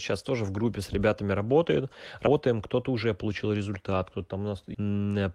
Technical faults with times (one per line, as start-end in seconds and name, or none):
2.26 damaged data in a compressed stream
4.73 damaged data in a compressed stream